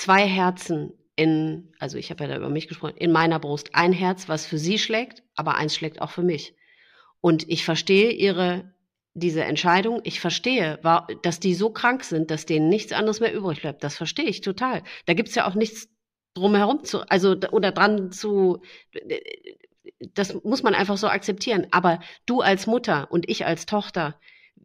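A speech recording with nothing technically wrong with it.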